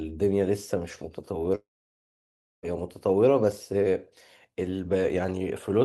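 Speech that cuts out from 1.55 s to 2.66 s: the last sound trails into a brief fading buzz, then about a second of near-silence, and the speech resumes with roughly 1.08 s gone. This is likely a long network dropout, where the receiver concealed missing packets before giving up.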